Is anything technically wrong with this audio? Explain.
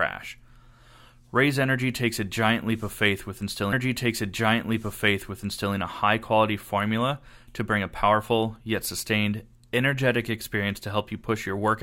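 Yes, there's a stream segment repeated. From about 3.72 s to 5.74 s, roughly two seconds of the speech plays a second time, so the clip runs about 2.02 s longer than it should. What's happening is that the player fetched or queued the same chunk of the stream twice and played both copies back to back. You hear the talker jump back and repeat themselves, with a small blip at the seam where playback snaps back.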